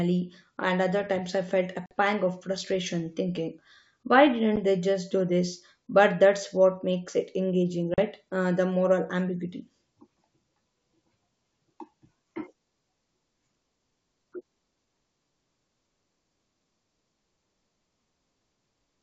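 At 1.86 to 1.93 s, after "other times I felt", a 50 ms gap, roughly five packets, cuts the speech. A 10 ms dropout follows at 4.56 s after "of frustration thinking why", then a 40 ms one from 7.94 to 7.99 s after "what makes it engaging". These are packet loss on an ADPCM call. Each hole shows as a hard-edged flat line in the waveform and a blank vertical band in the spectrogram. The receiving decoder's predictor and step size lose sync, so speech re-enters slightly distorted before settling.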